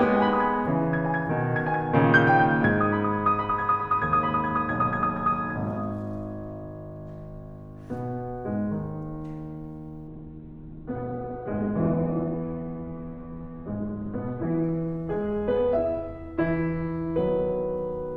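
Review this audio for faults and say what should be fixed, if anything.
From 10.11 s to the end, a call bitrate drop makes the music watery and coarse, its top narrowing from 20 kHz to 4 kHz. The added grit, not just dulling, tells it apart from a plain low-pass filter.

To prevent it, set a higher minimum encoder bitrate and smooth bandwidth-estimate reactions so brief network dips don't collapse the rate.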